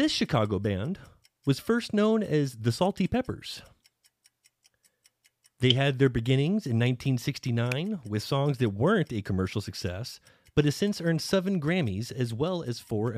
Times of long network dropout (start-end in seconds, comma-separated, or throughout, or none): none